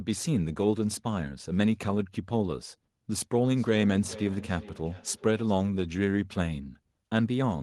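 A speech clip with feedback echo between two devices from 3.5 to 5.61 s: the speech returns at a fixed interval of about 400 ms, thinner and more ringing, at about 17 dB below the direct speech. A second device is replaying this microphone's signal into the room, and this device's echo canceller cannot remove it, since it only removes what its own device plays.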